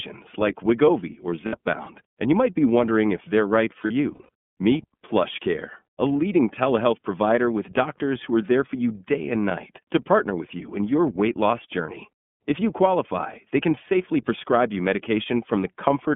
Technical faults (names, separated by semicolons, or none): iLBC codec; lost iLBC frames